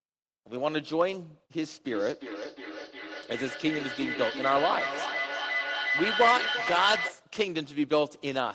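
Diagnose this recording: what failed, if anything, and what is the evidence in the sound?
Feedback howl, 1.7 to 7.28 s. The acoustic loop between two devices gains on each pass. A tone near 2 kHz peaks about 5 dB below speech, repeating roughly every 0.4 s.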